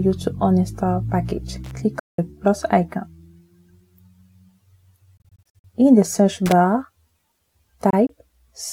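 Loose connector crackle at 1.64 to 1.79 s: a worn or dirty contact breaks and remakes the circuit as it shifts, chopping the signal into an irregular burst of scratchy crackle lasting about 0.15 s.

Bluetooth dropout at 1.99 to 2.19 s: the sound cuts to silence for about 0.19 s, then resumes further along as though it had kept playing, likely because audio packets failed to reach the headphones in time.

Bluetooth dropout at 5.17 to 5.65 s: here the loss is broken up, with about 0.21 s of silence scattered across roughly 0.46 s in short holes, the longest 46 ms. The effect is a stuttering, chopped stretch, likely from a run of late packets.

Loose connector crackle at 6.46 to 6.52 s: a brief spit of crackle, about 60 ms, as the faulty contact flickers again.

Bluetooth dropout at 7.90 to 8.10 s: two tiny gaps totalling 46 ms, the longest 23 ms, spread over about 0.19 s, heard as a quick double stutter, likely from packets arriving too late to play.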